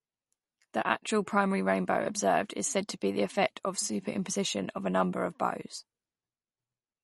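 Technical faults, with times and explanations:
Throughout: likely MP3 compression, with treble cut off above 11.5 kHz and a watery, swirly texture from weak frequency lines switching on and off, consistent with a low bitrate around 40 kbps.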